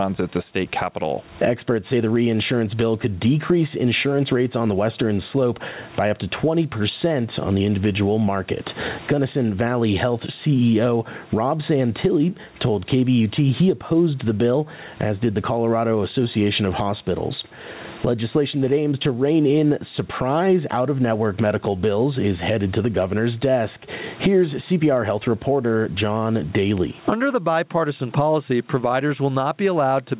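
From start to finish the speech shows gain pumping, with a swing of around 20 dB. The likely cause is input gain set far too high, with a fast limiter or compressor clamping down on each loud syllable. Unlike a noise gate, the background never cuts to silence, while loud and soft syllables are squeezed toward one flat level. The room noise sits about 41 dB below the speech, and the lack of any content above 4 kHz fits a narrowband call codec.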